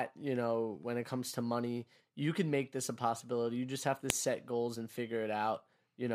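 At 4.10 s, between "just have to" and "set goals and", a file header played as audio gives a sharp snap: leftover header bytes appear as one sharp waveform spike and a thin broadband vertical line.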